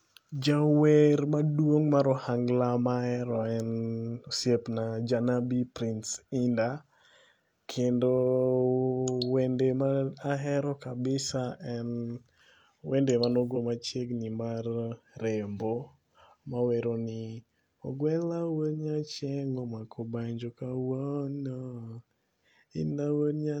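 A stretch of damaged data in a compressed stream hits this speech recording from 13.52 to 13.57 s: some bytes in the encoded file were lost or corrupted, so the decoder misread the frames there, lost sync and had to hunt for the next valid frame header. For about 50 ms the sound breaks into a short glitch that has nothing to do with the speech, right before "machiegni mar rembo" resumes.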